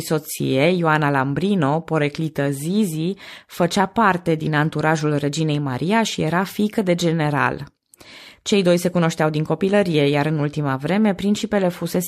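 Listening to this speech recording, nothing stood out as a technical problem at any point.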